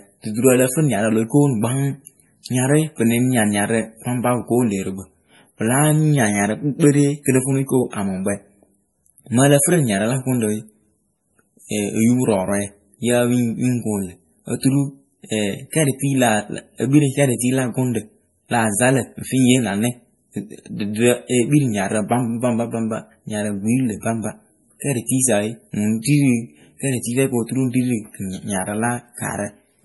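From start to finish the speech has a watery, swirling quality, with metallic chirps on the s sounds, smeared consonant attacks, and nothing above 11.5 kHz. This is heavy MP3 compression, likely at a low bitrate around 32 kbps. Starved of bits, the encoder cut the treble at a fixed point and dropped weaker frequency lines. Those lines blink on and off between frames, which creates the swirl and the chirping.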